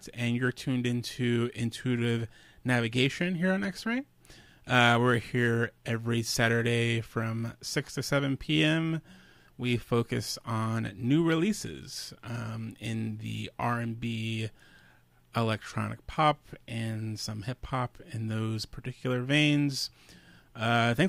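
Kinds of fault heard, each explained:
No technical faults can be heard in this audio; the signal holds steady and continuous throughout, with no audible breaks, distortion or level problems.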